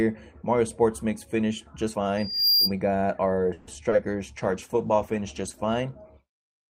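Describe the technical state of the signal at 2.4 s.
At 2.4 s the signal is caught in loudspeaker feedback squeal, running from 2.17 to 2.73 s. A microphone is hearing its own loudspeaker, and at 4.8 kHz the loop gain exceeds one. That tone swells over roughly a third of a second. It ends about 5 dB above the sound.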